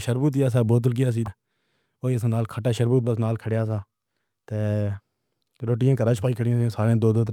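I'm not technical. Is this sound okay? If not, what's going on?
No, there's one glitch. Right after "شہبوود سا بوتل کی", from about 1.24 to 1.28 s, you'll hear a quick blip. That's damaged data in a compressed stream: a small chunk of the file got corrupted, so the player stumbled and briefly lost its place.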